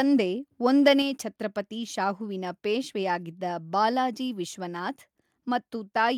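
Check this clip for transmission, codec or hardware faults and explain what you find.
Two faults show up early in this speech clip, both on the microphone side rather than in transmission or coding.

From 0.86 to 0.92 s there is microphone overload. The input level was likely set too high, driving peaks about 3 dB past the converter's ceiling so a small fraction of samples are flattened. The loudest moment just before "ಛತ್ರಪತಿ ಶಾಹುವಿನ ಪೇಶ್ವೆಯಾಗಿದ್ದ ಬಾಲಾಜಿ" turns harsh and crackly.

At 1.02 s the microphone volume steps down. The call software likely reacted to that clipped peak by cutting the device's input gain about 4 dB in a single jump, so voice and background together drop abruptly in level just before "ಛತ್ರಪತಿ ಶಾಹುವಿನ ಪೇಶ್ವೆಯಾಗಿದ್ದ ಬಾಲಾಜಿ".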